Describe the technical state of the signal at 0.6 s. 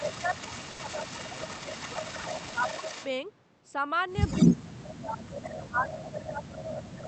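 At 0.6 s the speech dips by up to about 5 dB, likely speech suppressed in double talk, with the canceller ducking its own talker along with the echo across 0 to 1.96 s.

There's also an echo leak running 0 to 3.08 s, a copy about 10 dB down trailing 229 ms behind, likely with the canceller not clearing the loudspeaker pickup.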